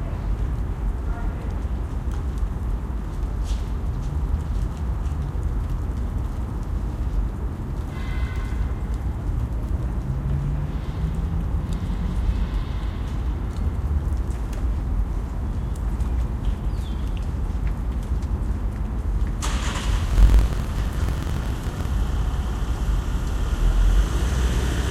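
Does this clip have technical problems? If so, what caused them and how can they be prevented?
Yes. From 20.09 to 21.90 s a 43.1 Hz buzz appears and the sound runs 1.12 times fast at near-normal pitch. This is a block size mismatch (truncated): one stage writes longer blocks than the next reads and the ends are discarded, which fits a 1024-sample read. Matching block sizes between stages prevents it.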